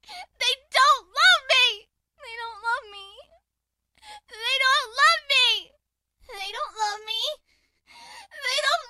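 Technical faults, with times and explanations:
6.38 to 8.89 s, channel delay (comb filtering): one channel runs about 10 ms late, and summing to mono cancels a fixed series of frequencies from roughly 40 Hz upward. The sound turns hollow and phasey, and, unlike a flanger, the notches never sweep.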